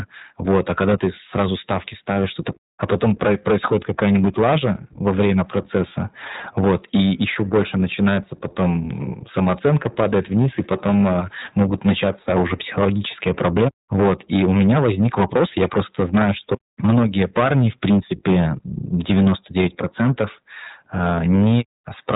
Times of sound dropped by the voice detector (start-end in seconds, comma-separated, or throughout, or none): none